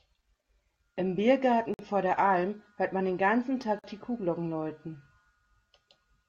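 Speech with two gaps at a join of encoded pieces, 1.74–1.79 s (51 ms) and 3.79–3.84 s (48 ms), recurring every 2.0 s, where separately encoded segments were joined with their encoder delay and padding left in. At 3.63 s a single sharp click sounds, with a fraction of a millisecond missing, most likely dropped samples making the waveform jump forward abruptly.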